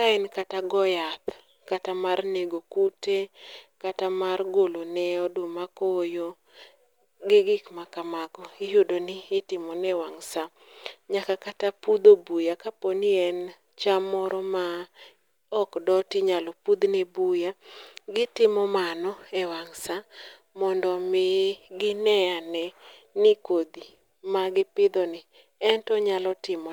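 Speech recording, no technical faults detected.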